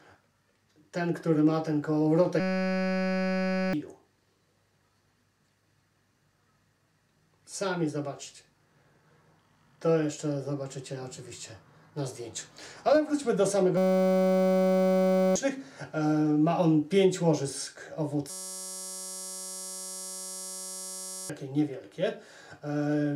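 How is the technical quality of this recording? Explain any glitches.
The recording has three system hang loops, at 2.4 to 3.73 s, 13.77 to 15.36 s and 18.30 to 21.30 s. Each time the computer stalls while the audio hardware keeps replaying the same 5.33 ms fragment, which fits a 256-sample buffer, producing a steady 188 Hz buzz. About 1.5 s, 1.5 s and 3 s of audio are lost. A spectrogram shows harmonic stripes at 188 Hz multiples, and the waveform repeats one identical cycle.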